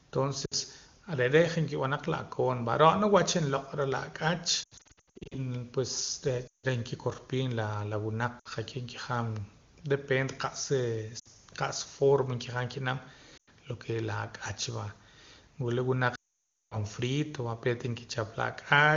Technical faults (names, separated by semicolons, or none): lost AMR speech frames